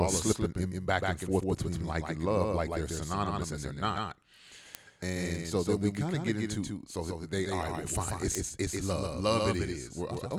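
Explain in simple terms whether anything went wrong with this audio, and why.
Two things went wrong in this speech. First, a doubled audio track runs through the whole clip. A second, quieter copy of the same audio trails about 150 ms behind. It sounds like a flat, hard echo with no room in it. The likely cause is the audio being picked up twice along a slower path.

Second, there are word clock ticks. They start at about 0.55 s, right after "are slipping", and continue until about 10.15 s. There are around fifteen sharp clicks of uneven strength, roughly every 0.7 s. Two devices were counting time slightly differently, so one sample slipped at each tick.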